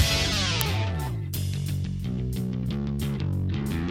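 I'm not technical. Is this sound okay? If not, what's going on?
No. At 0.61 s there's an uninitialised buffer: a tiny, loud crack from leftover memory, unlike a dropout, which goes silent.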